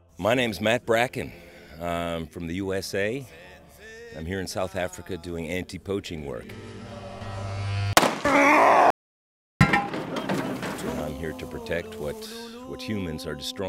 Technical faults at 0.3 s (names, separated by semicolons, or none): none